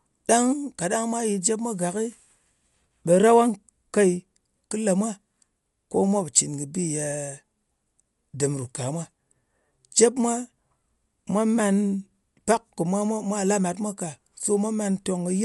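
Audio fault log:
Throughout: Dolby Digital compression, likely. The speech is dull, with nothing above 11.5 kHz, and has a rough, fluttering noise-fill. That texture, rather than plain muffling, points to a starved 64 kbps AC-3 stream.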